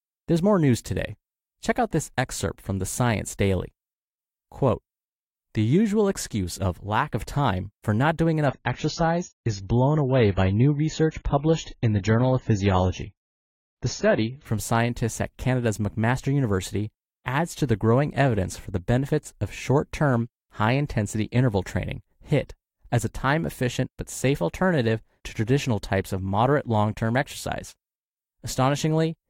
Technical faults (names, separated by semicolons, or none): adaptive stream at a lower bitrate